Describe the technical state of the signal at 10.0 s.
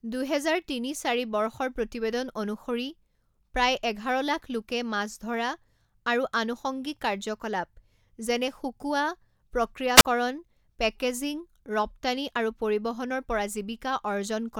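At 10.0 s a wireless microphone squelch dropout occurs, 9.95 to 10.05 s: the fading radio signal raises hiss, then the receiver squelch mutes the speech for 40 ms.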